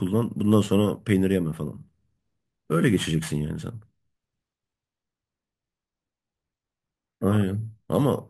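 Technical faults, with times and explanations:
Throughout, imaging from sample-and-hold upsampling: repeated samples mirror the speech into 11 to 22 kHz, about 27 dB down; unlike hiss, this fizz tracks speech level and moves against pitch.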